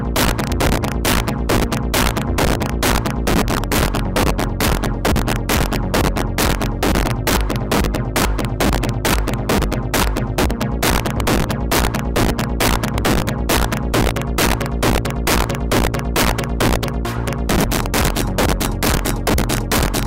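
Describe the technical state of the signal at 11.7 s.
Integer overflow runs through the whole clip, including 11.7 s. The signal is driven about 7 dB past the integer ceiling, and instead of being limited, those peaks wrap around to the opposite sign. With a small share of samples affected, loud moments break into harsh, violent cracks far sharper than ordinary clipping.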